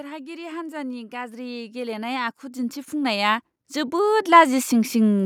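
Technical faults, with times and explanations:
0.6 to 5.0 s, automatic gain rising: the level climbs steadily by about 18 dB over more than four seconds, as the automatic gain control judged the input too quiet and kept raising its gain, so the speech and the background noise swell up together.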